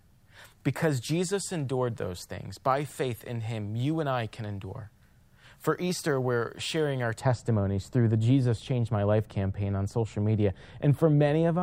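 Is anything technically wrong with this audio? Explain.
Yes. From 7.2 s to the end of the clip, the speech shows de-emphasis applied wrongly. A treble-cut filter intended to reverse pre-emphasis has been applied to material that either never had that boost or had already been corrected. As a result, the response rolls off smoothly above the midrange and sits about 11 dB lower at 10 kHz than at 1 kHz. The sound turns dull and muffled compared with the first part.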